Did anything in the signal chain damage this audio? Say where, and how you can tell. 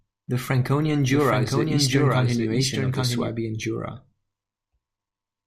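Yes: a doubled audio track runs from 1.10 s to 3.28 s. A second full-band copy of the speech trails the original by about 0.7 s at roughly 5 dB lower, with no reverb tail or room colouring. It cuts in and out abruptly at both ends. On a spectrogram, each syllable's pattern reappears shifted right by that fixed gap. The waveform shows overlapping envelopes. The likely cause is a slower second capture or routing path mixed back in.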